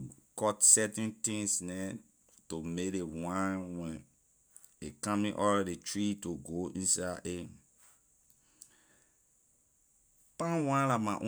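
Speech recording with no audible technical faults at any point.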